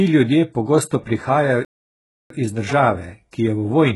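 Throughout the speech, the treble sounds gritty and lispy. This is likely HE-AAC compression at a very low bitrate, near 12 kbps, with band replication faking the highs.

From 1.65 to 2.30 s the sound cuts to silence for about 0.65 s, then resumes. This is a playback stall, likely from the player starving for data.

At 3.31 s a brief hiss smears ahead of a sharp attack. This is pre-echo: quantisation noise sized for the attack spreads across the quiet 18 ms before it.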